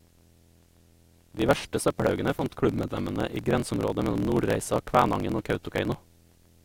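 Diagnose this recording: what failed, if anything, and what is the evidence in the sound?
Video or display buzz runs throughout the speech: a faint 75 Hz buzz with hash above it, well below the voice. This points to the analogue wiring, where a monitor or video cable running at a 75 Hz field rate couples its refresh interference into the audio path.

Block size mismatch (truncated) is also present throughout: a 43.1 Hz buzz, with the speech running 1.12 times fast at about its normal pitch. This is a driver or buffer fault. One stage writes longer blocks than the next reads, which fits a 1024-sample read block, so each block's tail is discarded.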